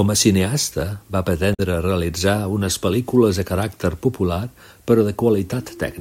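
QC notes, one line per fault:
1.53 to 1.60 s, damaged data in a compressed stream: right after "a cineasta va" there's a short glitch before "realitza unes". Corrupted bytes there made the decoder lose frame sync and hunt for the next valid header.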